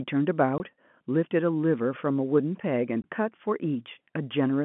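At 0.58–0.60 s and 3.02–3.04 s, packet loss filled with silence leaves 20 ms holes with hard edges: flat waveform gaps bounded by thin vertical spectrogram streaks.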